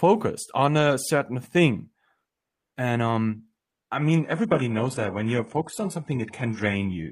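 Adaptive stream at a lower bitrate from 3.96 s onward: a slowed connection forced a gapless switch, abruptly removing everything above 11.5 kHz and leaving artefact-laden speech.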